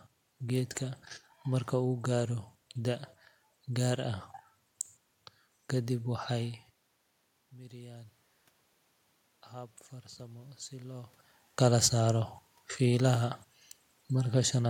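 Speech, with one technical fault: automatic gain rising from 9.51 to 11.2 s. The input falls by about 18 dB, and the automatic gain control reacts by slowly raising its gain, by about 3 dB here, so voice and room noise swell together over roughly 1.7 s. On a waveform the envelope creeps upward instead of stepping, and on a spectrogram the noise floor brightens along with the speech. The level shifts near 6.5 s and 11 s come from the talker moving.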